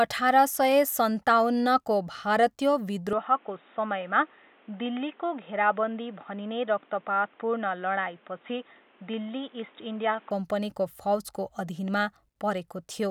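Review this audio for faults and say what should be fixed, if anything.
From 3.13 s to 10.31 s the speech turns dull and boxy, likely an input switched to a poorer device: a spectrogram shows everything above 3.8 kHz cut off abruptly and a new noise floor about 30 dB down, while the waveform keeps its level with no gap. To prevent it, lock the recording input so the system cannot change devices mid-session.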